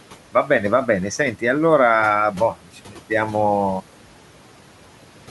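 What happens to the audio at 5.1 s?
A noise suppressor is cutting steady background noise by about 12 dB throughout the clip, including at 5.1 s, leaving the residual room noise pumping around the speech.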